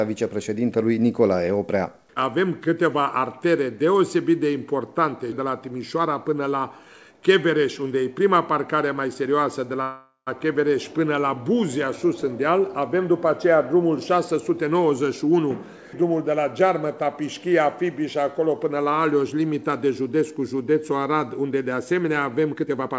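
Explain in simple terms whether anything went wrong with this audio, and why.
At 9.82 s the sound stops moving forward for about half a second, until 10.29 s. This is a call audio freeze, likely from delayed network packets. The receiver stretched the last sound into a fading buzz or hiss, with 130 ms of silence, then resumed exactly where it stopped, so nothing is lost.

From 22.54 s to 22.90 s the audio rushes at 140% speed while keeping its pitch. This is a jitter buffer speed-up: the receiver had stored too much audio and trimmed tiny repeated slices, roughly 150 ms in total, to catch up. Throughout, the call path passes nothing above 8 kHz.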